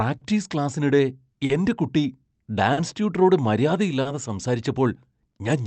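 Throughout the speech, the sender's audio clock runs slow against the receiver's by roughly 3 percent. This is clock drift between sender and receiver: the jitter buffer keeps draining faster than it refills, so playback falls into recurring timing hiccups instead of flowing evenly. The delivery carries a faint stop-start unevenness across the whole clip, heard over the dulled top end of the call codec, whose bandwidth stops near 8 kHz and which fits a 32 kbps Opus stream.

Each time the buffer runs dry, a short stall from a late packet follows. These occur at 0.17 s (just before "ക്ലാസ്സിനിടെ എന്റെ കുട്ടി"), 1.45 s (just before "എന്റെ കുട്ടി"), 2.73 s, 4.01 s and 5.29 s. Each time, the receiver stretches the last sound by about 40 ms while it waits, then resumes from the same point. Nothing is lost, but each spot has a briefly held sound with a slight buzz or dip and a small hitch in the rhythm.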